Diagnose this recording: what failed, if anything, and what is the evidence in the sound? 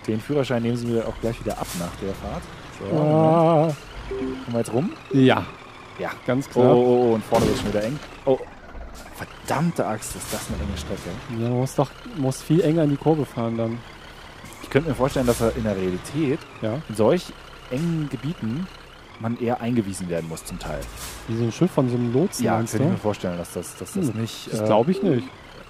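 No faults can be heard.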